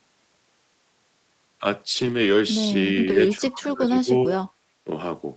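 From 1.93 to 2.31 s the speech turns rough and grainy for about 200 ms, then again briefly at 3.09 s for about 40 ms. This is a lost packet rebuilt from error correction. The decoder filled each loss with a low-bitrate backup copy. Unlike plain packet-loss concealment, there is no gap or smeared, buzzy repeat, only a short stretch of coarser coding noise.

From 3.37 to 4.42 s the voice dips in pieces, at worst by roughly 25 dB, for about 0.7 s in total. A shallower dip of about 15 dB follows at 4.84 s. This is speech suppressed in double talk, likely from an echo canceller ducking the talker while the far side spoke.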